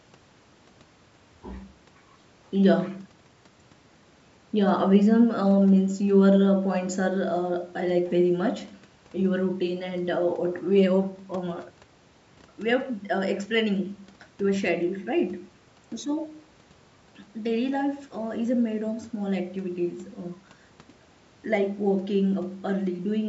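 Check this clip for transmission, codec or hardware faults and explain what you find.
No transmission, codec or hardware faults can be heard in this speech recording. It has passed through a call's microphone processing, which trims the lowest bass and leaves nothing above 8 kHz, as that path normally does.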